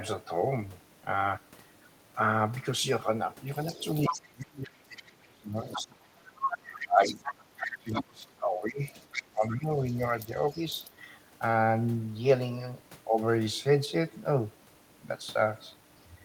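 From 3.54 to 5.02 s a second, fainter voice can be heard under the talker, about 10 dB down. This is the other side's voice leaking through: the far end's audio, played on the talker's loudspeaker, was likely not fully removed by the echo canceller. It returns in a short scrap at 5.62 to 5.83 s, again at 6.36 to 8.04 s, and more faintly, about 20 dB below the talker, from 8.85 to 10.9 s. On a spectrogram it appears as a second set of weaker harmonic striations interleaved with the main ones.

Overlapping these stretches, the talker's own voice is speech suppressed in double talk. The echo canceller, likely unable to separate the talker from the echo, turns both down. Between 4.08 and 6.22 s the voice drops as much as about 30 dB. Dips follow at 6.53 to 7.25 s (about 25 dB) and 7.63 to 9.85 s (about 20 dB), with a slight 5 dB flicker at 10.25 s. The waveform envelope shows these as sudden hollows, and the spectrogram shows the speech energy thinning and gapping.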